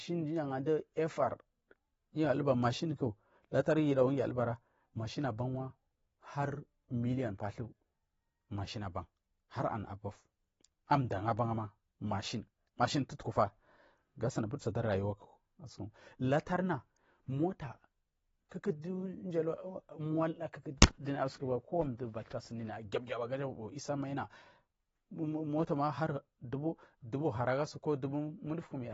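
From start to finish the speech sounds dull and smeared, with nothing present above 7.8 kHz, so the top octave of brightness and air is simply missing and the damage is plainly audible throughout. This is likely AAC compression, with an AAC-LC encoder forced to a low bitrate, around 24 kbps. With so few bits per frame it lowers its upper frequency limit and quantises the remaining spectrum coarsely, discarding detail the hearing model treats as expendable.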